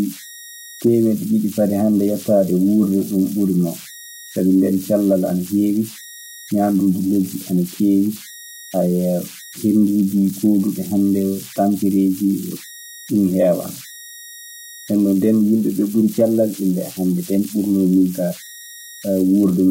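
Converter idle tones run through the whole speech clip. The delta-sigma converter was working without dither, so at low input levels it settled into repeating bit patterns that generate a whistle around 2 kHz, about 20 dB below the speech, most audible in pauses and as grain under quiet syllables. A spectrogram shows a thin horizontal line near 2 kHz, and on the waveform the pauses never fall flat.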